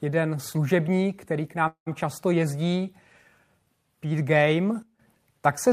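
At 1.67 s the speech stops and a call audio freeze follows, lasting until 1.88 s. The final sound before the break carries on as a decaying buzz, then falls to roughly 110 ms of silence. When the speech returns it continues from the point where it stopped, with nothing lost, but everything after it now arrives 190 ms later. This pattern likely comes from delayed packets leaving the jitter buffer empty, so the receiver filled the 190 ms wait with synthetic sound.

At 4.83 s a sudden gain jump cuts the level by about 14 dB with no ramp. The speech and the background noise drop together, which shows the change is a gain step applied to the whole signal rather than a change at the source. The reduced level holds until 4.99 s. A digital gain setting applied from one sample to the next is the probable mechanism.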